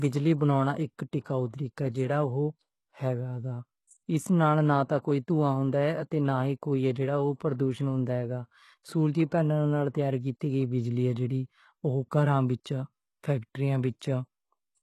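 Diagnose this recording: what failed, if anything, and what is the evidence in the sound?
The fault sits at the codec stage, and the clip most likely went through HE-AAC compression. Across the whole speech recording the damage is plainly audible: the treble sounds bright but synthetic, and sibilants come out gritty and lispy, which fits a very low bitrate of around 16 kbps. On a spectrogram, nothing appears above 12.3 kHz. Over the crossover, the upper band looks like a smeared copy of the lower harmonics whose lines do not continue them, because spectral band replication pasted lower content upward and shaped it with only a coarse envelope.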